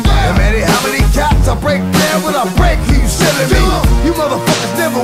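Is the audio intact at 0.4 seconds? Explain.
No. At 0.4 s, as across the whole recording, a harsh, buzzy distortion rides on the sound, most likely from a stuck bit forcing about half the samples off by a fixed step of about -40 dBFS. Unlike ordinary quantisation noise, it keeps a steady hiss even at near-silent levels.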